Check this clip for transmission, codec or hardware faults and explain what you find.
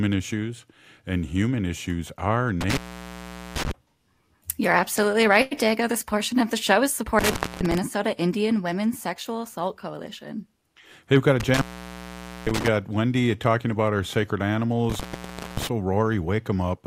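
One hardware fault recurs in the speech: intermittent contact at 2.61–3.71 s, 7.19–7.78 s, 11.40–12.68 s and 14.90–15.67 s. A loose connection briefly opens, dropping the signal for about 0.78, 0.25, 0.85 and 0.58 s, with crackle at each break and faint hiss during the gap.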